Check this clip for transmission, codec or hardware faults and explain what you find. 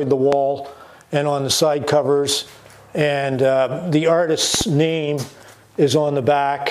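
Two loud pops are present, one hardware-type fault occurring twice. Loud pop at 0.33 to 0.36 s, then a double pop at 4.55 to 4.65 s: a sudden voltage pulse, likely from a plug, switch or static discharge, is added to the signal, peaking roughly 15 dB above the sound, which continues underneath each thump.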